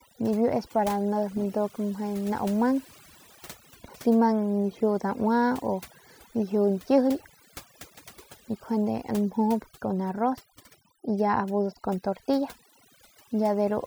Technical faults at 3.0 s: overdone noise removal

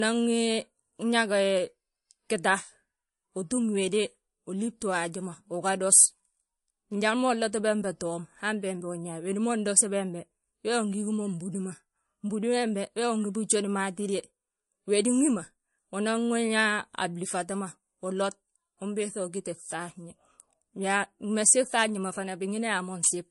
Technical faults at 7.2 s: low-bitrate audio saved at a high bitrate

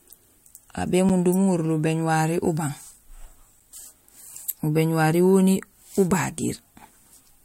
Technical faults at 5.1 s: none

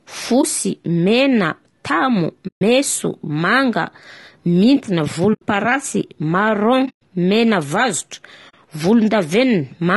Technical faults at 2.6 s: low-delay AAC compression; AAC frame loss with muting

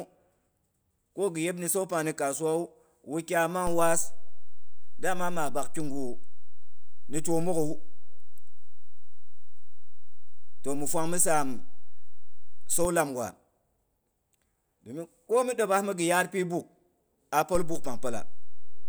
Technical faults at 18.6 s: DC step

